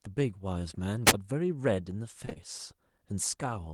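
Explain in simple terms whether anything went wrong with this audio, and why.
Two things go wrong in this speech, both brief.

From about 1.05 to 1.14 s there's a wireless microphone squelch dropout. The radio link from the mic weakened for a moment, a little hiss crept in, and the receiver muted the sound to near silence for about 18 ms before the link recovered and the audio came back. It's a quick hiss-and-gap, the kind you get when a transmitter briefly loses its signal.

Then, from about 2.25 to 2.38 s, there's short concealed packet loss, three hits in a row. Each time roughly 20 ms of audio never arrived, and the receiver patched the hole by stretching out the sound it had just played before blending back into the real signal. Back to back like this, the patches add up to a short smeared, slightly wobbly stretch where a quick sound could get swallowed.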